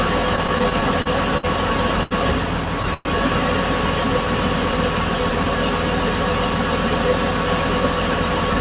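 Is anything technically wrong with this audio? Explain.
Yes. The audio has four jitter-buffer faults, all from packets arriving at uneven times. The top end stops at 4 kHz throughout, which is the normal band limit of the call codec.

Repeated stalls (stutter), 0.36 to 1.45 s: packets kept arriving late or too slowly, so the jitter buffer ran dry eight separate times. Each time the receiver extended the last sound to cover the wait, adding about 149 ms in total, roughly 14% of that span, with the longest gap at 56 ms. Nothing is lost, but the sound drags and jerks forward unevenly.

Short stall from a late packet, 2.03 to 2.13 s: a single packet missed its playout time and the buffer emptied. The receiver held the preceding sound for 75 ms until the packet showed up, then resumed from the same point, so no material is dropped. The result is one sound sustained too long, with a faint buzzy or dipping quality where the extension was synthesised.

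Call audio freeze, 2.94 to 3.07 s: the sound stops moving forward for 112 ms and the last fragment is carried on as a fading buzz, without dropping to silence before playback resumes where it left off. The likely cause is packets held up in transit long enough to drain the jitter buffer, with the receiver filling the wait by continuing the last sound. This inserts a gap rather than removing anything.

Jitter buffer speed-up, 7.32 s to the end at 8.60 s: the buffer held more audio than its target, so the receiver trimmed it back by cutting out many short pitch-period-sized slices in succession, roughly 50 ms in all. Playback runs at about 103% speed with pitch unchanged, so the final stretch is only slightly faster.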